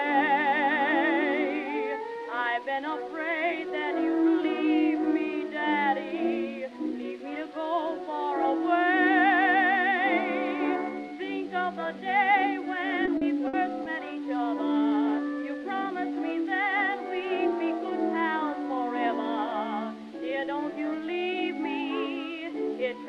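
Around 13.05 to 13.87 s there's a burst of repeated packet loss, and it turns the sound robotic for that stretch. Data kept arriving late or not at all. Each gap was papered over by stretching the last bit of audio, and then the next gap hit almost straight away. About 140 ms goes missing across four holes, the longest around 60 ms, so it comes out choppy, with pieces missing.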